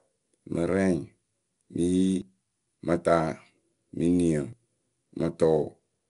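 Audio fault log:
throughout 4-bit ADPCM compression: each sample is coded as a 4-bit step from a predicted value, at a rate that fits about 89 kbps. The result is a gritty hiss on every loud stretch of speech, roughness on sharp attacks, and nothing heard above 10.6 kHz.
2.22 s dropped buffer (overrun): the program likely failed to read its samples before the hardware overwrote them. About 20 ms of speech is lost, and the two sides join directly, so there is a sudden jump rather than a silent gap.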